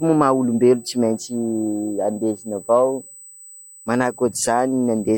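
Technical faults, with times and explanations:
Throughout: USB whine, a steady 8 kHz tone sitting roughly 25 dB below the speech. USB microframe current every 125 microseconds leaks through power or ground.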